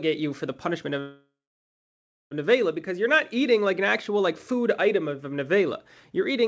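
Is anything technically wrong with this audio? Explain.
Yes. From 1.00 s to 2.33 s, just after "you for the punishment", there is a call audio freeze. The most likely cause is that packets stalled and the jitter buffer emptied. The receiver stretched the last sound into a fading buzz or hiss, then about 0.99 s of silence, before resuming where it stopped. This inserts a 1.31 s gap with nothing lost and delays everything after it. On a spectrogram, a short smeared tail decays into a blank band before the speech returns.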